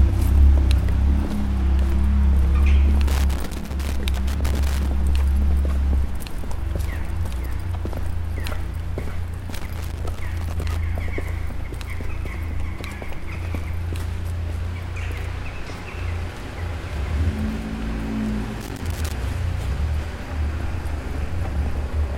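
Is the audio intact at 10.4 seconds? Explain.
No. From 9.51 to 10.76 s a loose connector crackle chops the sound as a worn contact makes and breaks, giving irregular scratchy bursts. The waveform shows ragged dropouts and sharp spikes, and the spectrogram shows scattered broadband vertical streaks.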